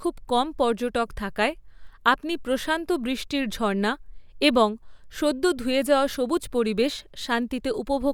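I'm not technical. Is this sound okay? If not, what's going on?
Yes, it sounds fine: listening through this speech recording, nothing stood out as a problem.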